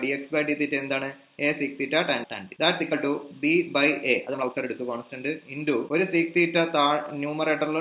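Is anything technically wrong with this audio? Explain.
Yes, there are two stretches of jitter buffer speed-up, from 2.43 to 3.68 s and from 4.20 to 7.67 s. The receiver's jitter buffer had built up more audio than its target and drained it by repeatedly cutting out pitch-period-sized slices, removing about 0.2 s and then about half a second. The sound plays roughly 13% fast at unchanged pitch and feels rushed. The band-limited, G.711-style call path, with nothing above 4 kHz, can also be heard.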